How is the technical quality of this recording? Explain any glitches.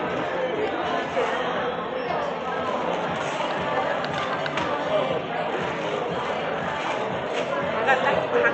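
No faults to report: the sound carries the ordinary coding texture of a WebRTC call path, with the top end stopping at about 8 kHz, as the Opus codec on that link would give.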